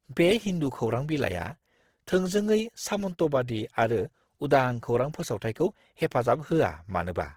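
From start to end the speech carries plainly audible Opus compression, likely in CELT mode at a rate near 16 kbps. Starved bands get filled with folded or noise-like energy, so tones turn grainy and rough. A spectrogram shows full-bandwidth but speckled, smeared harmonics.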